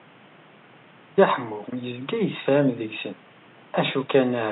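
No technical faults are audible in the speech; the only other sound is the room's own background noise, sitting about 28 dB below the speech, which belongs to the recording space rather than the signal path.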